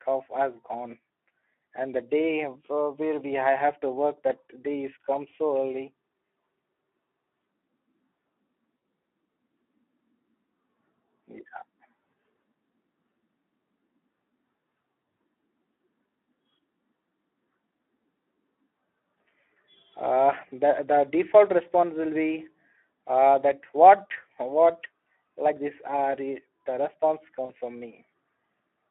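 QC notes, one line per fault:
Throughout, Speex codec: a low-rate CELP coder, consistent with roughly 11 kbps, has too few bits for the excitation. The speech sounds hoarse and noisy, plainly damaged, and confined to a narrow 250 Hz to 3.4 kHz telephone band.
8.77–8.81 s and 27.45–27.52 s, VoIP packet loss concealed by the speech codec: about 40 ms of packets go missing each time, fitting two lost frames. The decoder stretches its last pitch and filter with falling gain, leaving a brief, fading smear before the speech recovers.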